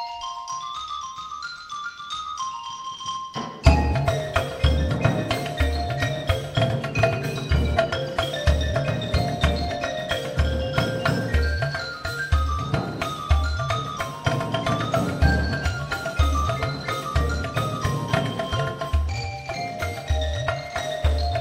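No technical faults can be heard anywhere in the audio.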